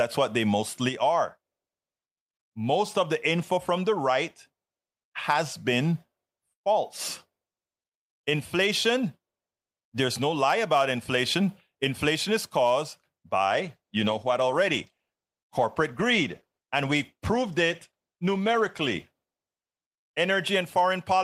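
At 13.48 s a call bitrate drop cuts the encoder from 40 to 16 kbps until 20.43 s, so the speech turns coarse, watery and muffled, losing its highs.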